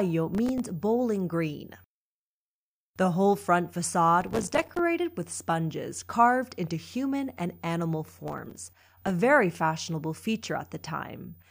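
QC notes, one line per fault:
0.35–0.65 s, 4.21–4.79 s and 8.28–9.10 s: processor overload crackle. The processor repeatedly misses its buffer deadlines, and each miss drops a few milliseconds of silence with hard edges, which fits a buffer of roughly 3 ms. A handful of gaps in the first burst and dozens in the later two merge into gritty tearing. Unlike clipping, it ignores signal level, and unlike a single dropout, it is a dense cluster that clears once the load eases.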